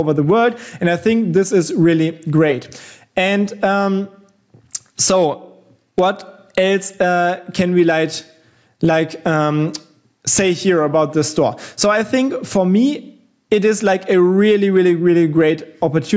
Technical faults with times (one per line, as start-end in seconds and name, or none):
0.00-16.17 gain pumping